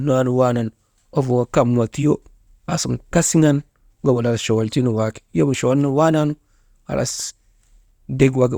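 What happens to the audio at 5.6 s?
Nothing goes wrong at 5.6 s; the speech continues intact through that moment.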